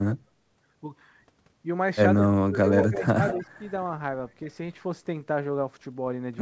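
Speech suppressed in double talk, 2.18 to 2.59 s and again 2.88 to 3.19 s: the voice dips by about 30 dB, then about 15 dB. Both sides talking at once likely left the echo canceller unable to separate this talker from the loudspeaker echo, so it turned everything down.

Echo leak, 2.81 to 3.03 s and 3.28 to 3.47 s: a copy of the voice, about 10 dB below it, trails by roughly 190 ms. The far end's canceller likely failed to remove all of its loudspeaker pickup, and the leftover was sent back.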